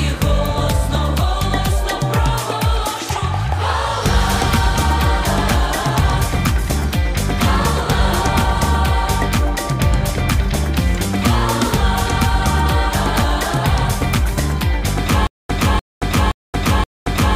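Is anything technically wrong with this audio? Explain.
Yes. From about 15.27 s right through to the end, there's a stutter with silent gaps. A roughly 298 ms fragment plays, then about 225 ms of dead digital silence, and the same fragment comes back, four times at a steady 523 ms rhythm. That pattern most likely comes from the player or stream stalling, replaying its last buffered chunk on each retry and then running dry. Whatever audio belonged in that stretch never comes through.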